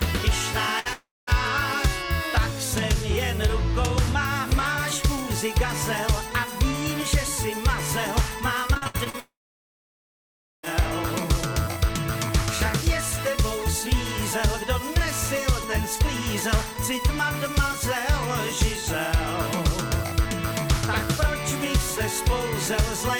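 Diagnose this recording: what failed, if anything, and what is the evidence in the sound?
Network stage, burst of packet loss: at 0.79 to 0.87 s the sound does not stop. The last fragment is stretched and faded for about 60 ms, then the audio resumes further on with that stretch missing. The receiver's concealment filled a short run of lost or late packets. Unlike the dropouts below, the fill never runs out into silence, and it is a single event rather than a string of holes.

Network stage, long network dropout: two stretches behave the same way. From 0.93 to 1.29 s the last sound is carried on and fades, then about 200 ms of silence follows before the audio returns, with about 340 ms lost. From 9.20 to 10.65 s the fade gives way to about 1.3 s of silence, with about 1.44 s lost. Both are likely a complete interruption of arriving packets. The silence after the concealment has faded is what separates them from a packet-loss burst.

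Network stage, repeated packet loss (robotic sound): from 8.74 to 9.15 s the sound turns choppy. Six separate gaps, the longest 65 ms, are each patched by continuing the previous sound, and together they cover about half the span, with about 200 ms missing. Intermittent packet loss leaves each hole to be concealed before the next arrives. It leads straight into the second dropout, but the audio keeps breaking and returning instead of going silent.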